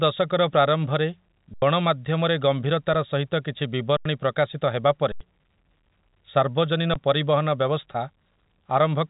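Speech, band-limited to 3.8 kHz by G.711 A-law telephone coding, drops out four times. Each dropout freezes to a flat, steady level, then resumes as a chunk of speech goes missing. This is an underrun with held sample. The output buffer ran dry, so the converter held its last value until data returned. It happens at 1.54–1.62, 3.97–4.05 and 5.12–5.21 s, each about 85 ms long, which fits a 4096-sample buffer, with around a tenth of a second of speech lost. A shorter one comes at 6.94 s, losing a brief sliver.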